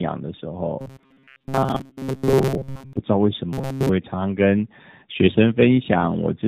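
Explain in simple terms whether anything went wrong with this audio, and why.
Tandem speech coding runs through the whole clip. The call crossed two networks that each squeeze speech with their own speech codec, so the audio was unpacked and squeezed again at the border. The second coder had to work on sound the first had already roughened, and the damage adds up. This leaves the speech muffled, rough and warbly from start to finish.

Robotic sound from repeated short buffers appears from 0.79 to 2.98 s and again from 3.53 to 3.90 s. Here the speech turns into a stiff, metallic buzz at 134 Hz that still loosely follows the talking. The likely cause is fresh audio arriving too slowly, so the software filled the gaps by replaying its last tiny slice over and over. That slice is about 7.5 ms long, which fits the buzz pitch. Roughly 70 percent of those stretches are replayed sound, and the real speech there was skipped.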